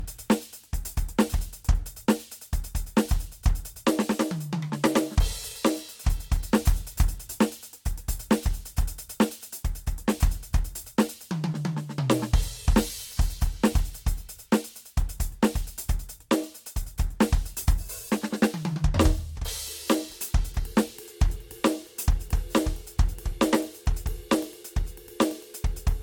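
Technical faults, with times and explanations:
throughout generation loss: music sounds swirly and hollow with blurred attacks and nothing above 19.3 kHz, worse than one encode near 75 kbit/s, likely about five stacked lossy re-encodes.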